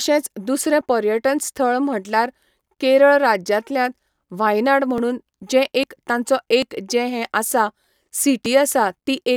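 The speech has five small skips at 0.81 s (just before "पर्यटन स्थळ"), 4.98 s (right after "केरळ राज्यांतल्यात 'व्हायनआड'"), 5.84, 6.62 and 8.46 s. Each one jumps ahead, losing roughly 10 ms, or about twice that at 5.84 s. This is likely a dropped buffer (overrun).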